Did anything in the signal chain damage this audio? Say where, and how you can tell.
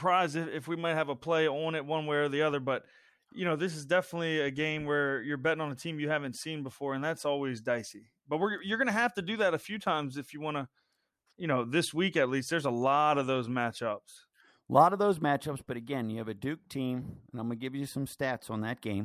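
No, nothing along the chain left a mark on this speech recording that I can hear, so there's nothing to trace back to any stage.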